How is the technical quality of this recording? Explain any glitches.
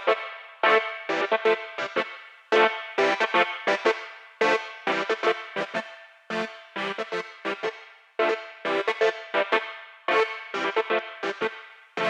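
Nothing stood out as a glitch or technical problem on listening to this recording.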